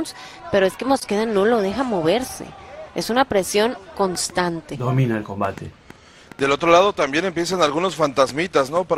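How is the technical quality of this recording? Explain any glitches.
The recording has one clear fault, a train of clicks. It starts at 4.15 s and runs to 8.78 s. The clicks arrive about three times a second, at an uneven pace, around fifteen in all. Each is a short, similar pulse that rises a few decibels above the sound itself. They are heard as sharp ticking laid over the audio, gaps included. The likely cause is an outside pulse source, such as interference from nearby equipment or a faulty connection or power supply.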